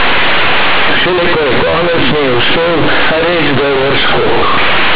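From start to finish, the speech has been hit by companded audio read as linear: the mu-law bytes are being played straight as 8-bit samples, with nobody expanding them back out. That logarithmic scale gets flattened, so every sign flip throws the waveform across half its range and quiet bits come out as loud as peaks. You hear it as harsh, buzzy, overloaded distortion, with heavy noise filling the pauses. The underlying telephone coding itself is fine; it's just decoded wrong.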